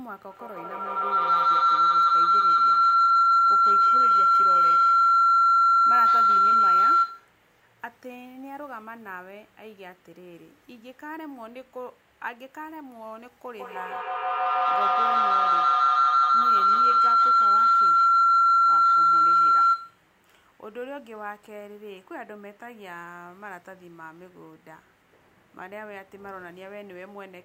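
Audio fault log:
0.31–7.39 s and 13.55–20.10 s, feedback howl: a piercing tone near 1.5 kHz swells to about 18 dB above the speech, with the loop repeating roughly every 150 ms. Sound from a loudspeaker re-enters a microphone in the same room, gaining level each pass, until the loop is broken.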